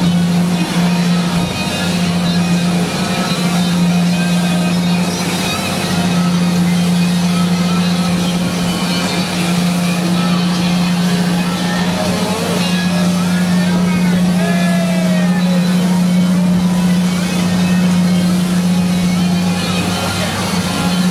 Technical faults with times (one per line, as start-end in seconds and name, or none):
none